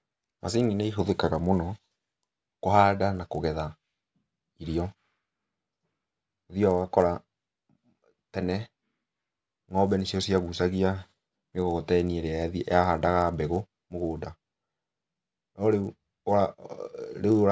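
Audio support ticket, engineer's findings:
Resampler restarted on every block. Steady 100 Hz buzz under the speech for the whole clip, gone in pauses. Fits 10 ms blocks, each converted alone, probably 24 kHz to 16 kHz. Missing neighbour samples leave an error at every block edge.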